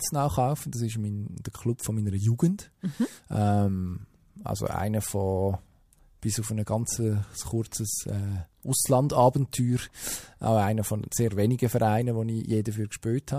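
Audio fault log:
Nothing to log here; I listened to this speech and didn't hear anything go wrong at any point.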